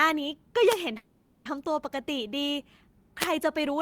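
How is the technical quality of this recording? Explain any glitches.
The speech is interrupted by three glitches of two kinds.

From 0.67 to 0.78 s and again from 3.19 to 3.27 s, a brief swish of static rises over the speech. These are wireless microphone noise hits, where the FM radio signal fades as reflections cancel and receiver noise surges through.

From 0.97 to 1.48 s the sound hangs as a fading buzz or hiss for about half a second, then resumes with nothing lost. This is a call audio freeze, likely from delayed packets draining the jitter buffer, so a 480 ms gap was inserted.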